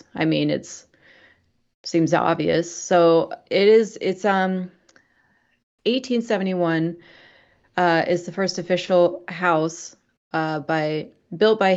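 Nothing technically wrong can be heard in this speech recording at any point, so there are no times or causes to report.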